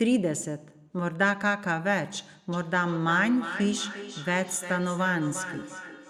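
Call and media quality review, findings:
Feedback echo between two devices, 2.53 s to end: speech recurs roughly every 0.4 s, about 11 dB down; the second device's playback escapes the local echo canceller.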